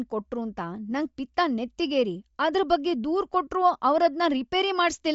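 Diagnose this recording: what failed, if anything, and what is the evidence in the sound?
Bluetooth LC3 compression, present throughout the speech at the codec stage. Nothing reaches above 7.7 kHz, and the upper band carries a breathy, grainy texture instead of clean detail, with the codec damage plainly audible from start to finish. The likely cause is a low-rate LC3 stream: the encoder discards much of the upper spectrum and fills it with shaped noise, which fits a rate near 32 kbps with 10 ms frames.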